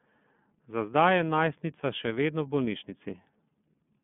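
From start to finish, the speech carries the marks of the iLBC codec. The band is narrow, roughly 150 Hz to 3.5 kHz, with nothing above 3.8 kHz. Sibilants lose their edge and the sound is boxed in. The codec rebuilds the excitation of each 30 ms frame separately, which fits its 13.33 kbps mode. That leaves a plainly audible roughness and a slightly synthetic, buzzy texture across the whole clip.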